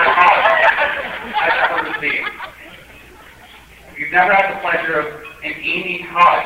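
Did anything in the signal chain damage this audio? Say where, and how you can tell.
Yes: low bit depth without dither throughout, likely truncation in sample-format conversion, fitting 8 bits; grit about 40 dB down tracks the signal, unlike steady hiss.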